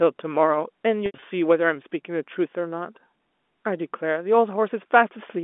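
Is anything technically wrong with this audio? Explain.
Yes, there's a patch of packet loss with pitch repetition at 1.06 to 1.22 s in this telephone-band speech. About 120 ms of audio goes missing, scattered over 160 ms, with the longest single gap around 80 ms, which fits roughly six 20 ms packets dropping out. The receiver fills each hole by looping the last pitch period and fading it, so you hear a brief held, buzzy smear before the speech cross-fades back in. The narrow 250 Hz to 3.5 kHz G.711 line band carries through the repair unchanged.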